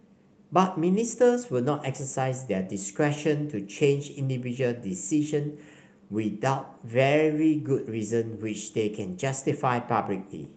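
No technical faults can be heard in this speech.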